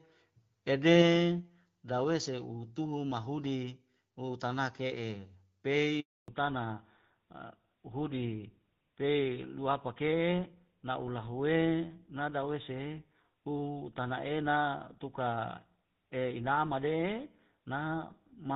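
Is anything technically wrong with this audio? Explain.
Yes, there are two faults, both around 6 s into this speech clip.

Handover gap, 6.0 to 6.28 s: the call was passed from one network to another, and no speech frames reached the receiver while the link was re-established. The speech fades out within a few tens of milliseconds and stays silent for 280 ms until the new connection starts delivering audio. Anything said during that stretch is lost.

Fallback to narrowband, 6.28 s to the end: after the handover, the call dropped out of HD Voice. Before the switch, the light coding texture fits AMR-WB at around 12.65 kbit/s. Afterwards, the sound is consistent with an older narrowband codec such as GSM full rate. That codec carries nothing above 4 kHz, so the upper band disappears for the rest of the clip. The speech loses its crispness and takes on a duller, rougher, more muffled telephone quality.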